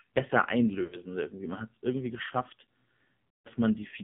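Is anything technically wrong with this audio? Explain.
Yes. The AMR narrowband mobile codec runs throughout. This speech sits in a 150 Hz to 3.5 kHz band, with a vocal tract model driven by sparse pulses. It sounds heavily buzzy and synthetic, which fits a low 5.9 kbps mode.

Lost AMR speech frames occur at 0.84 to 0.98 s and 3.37 to 3.48 s. After failed frames, the decoder repeated the last good pitch and vocal tract settings at falling gain, so the sound smears and fades. The first gap points to about four 20 ms frames and the second to about eight.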